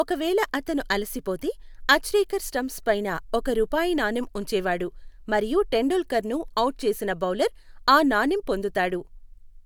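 No dropouts, clicks, distortion or other technical faults can be heard anywhere in the speech.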